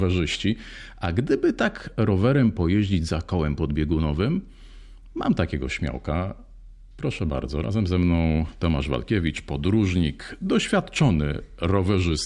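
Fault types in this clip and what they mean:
No faults detected in this speech recording.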